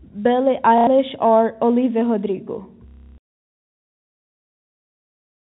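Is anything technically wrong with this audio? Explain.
Yes. There is packet loss with the last packet repeated, at 0.78 to 0.87 s and 2.88 to 3.18 s. Lost audio was filled by replaying the previous chunk, which fits 30 ms packets. The longer gap buzzes at about 33 Hz, like a robotic stutter. The telephone-band G.711 coding underneath keeps everything below 4 kHz.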